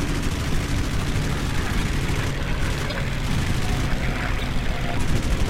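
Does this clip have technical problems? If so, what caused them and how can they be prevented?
Yes: corrupt frames were decoded, causing bursts peaking around -15 dBFS at 1.74–1.83, 2.90–2.93 and 4.38–4.43 s, where flipped bits scrambled gains and spectral codes. Checksum each frame and conceal damaged ones instead of playing them.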